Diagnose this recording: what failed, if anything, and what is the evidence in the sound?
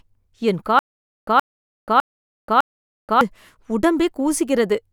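The playback side stalled, most likely a stream or player buffer running dry and retrying. This produces a stutter with silent gaps from 0.79 to 3.21 s: the same 0.12 s fragment of speech is played four times, each followed by about 0.48 s of digital silence, so it recurs every 0.60 s at an even pace. Whatever speech belonged in that span never arrives and is simply lost.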